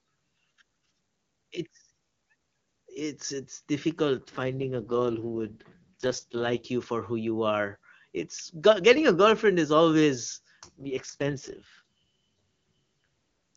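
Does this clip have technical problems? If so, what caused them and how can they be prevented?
Yes. Twice the speech turns rough, raspy and synthetic without losing bandwidth or dropping out: from 4.18 to 6.66 s, just after "it's it's" until "you for who you", and from 10.63 to 13.56 s, after "a girlfriend is always". These are AMR rate drops. A weak radio link forced the AMR-WB codec to spend its bits on error protection, consistent with a fall from 23.85 kbit/s, where the speech sounds clean, to 6.6 kbit/s, its lowest mode. Better signal coverage or a stronger link prevents these drops.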